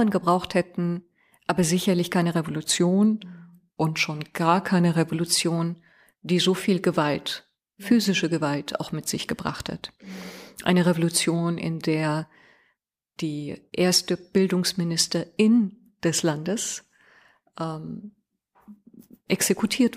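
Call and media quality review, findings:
Drift correction step, 2.7 to 5.15 s, right after "hätten aber sicherlich keine". Speech slows by about 5.75% and drops roughly a semitone (102 cents), then snaps back. Likely clock-sync resampler. It changed playback rate in one jump to rebalance its buffer, then reverted.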